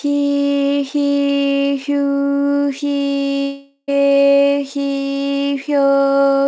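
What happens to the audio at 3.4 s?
At 3.42 s the sound turns into a fading buzzy continuation of itself for about 0.46 s, drops to near silence, then picks back up at 3.90 s with that stretch gone. That's most likely a long network dropout, with the receiver concealing the missing audio.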